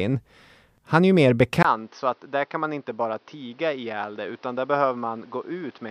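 At 1.63 s, just after "är ju mer", the speech cuts out for 20 ms. It returns duller and quieter, with nothing above 6.2 kHz and faint new background noise underneath. This lasts to the end. The input likely switched to a poorer device.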